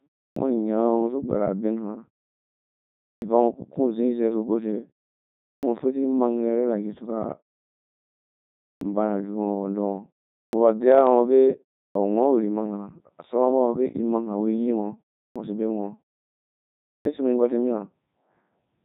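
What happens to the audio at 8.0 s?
At 8.0 s the speech sounds robotic and buzzy, with nothing above about 3.8 kHz, as it does throughout the clip. The cause is the Codec 2 vocoder at 3.2 kbit/s: only pitch, voicing, energy and a spectral envelope survive, and the decoder rebuilds the voice from sine waves.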